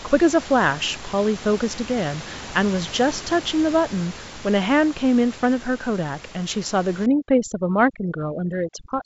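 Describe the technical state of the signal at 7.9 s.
Overdone noise removal, from 7.06 s to the end of the clip: an overly aggressive suppressor cuts frequency bands near the room noise, leaving twinkling specks in near silence and taking quiet parts of the speech with them.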